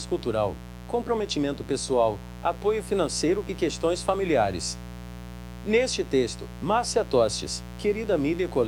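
Mains buzz runs throughout: spiky interference locked to 60 Hz mains, rich in harmonics, sitting only around 15 dB below the signal as a steady, raspy buzz.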